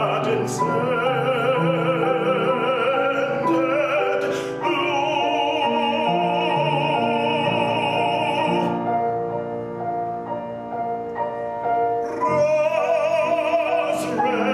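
No technical faults can be heard anywhere in the audio.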